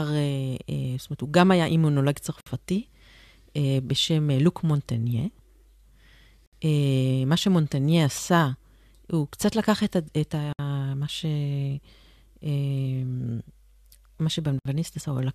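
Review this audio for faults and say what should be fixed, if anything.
Speech has a gap at a join of encoded pieces every 4 s: 2.41–2.46 s (58 ms), 6.46–6.53 s, 10.53–10.59 s and 14.59–14.65 s (64 ms each). Each piece's encoder start delay and final-frame padding stay in, appearing as thin blank vertical columns in the spectrogram and flat-line dropouts in the waveform. To prevent it, trim encoder delay and padding before joining, or encode continuously.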